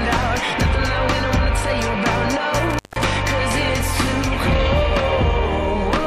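Between 2.70 and 3.04 s the audio drops out with an intermittent contact fault, as if a loose plug or cable briefly lost its connection. The signal is gone for about 171 ms, bracketed by crackle as the contact breaks and remakes, and faint hiss remains during the gap. On a waveform this appears as a sudden collapse to near-flat with spiky edges. A spectrogram shows a dark vertical band framed by thin broadband streaks.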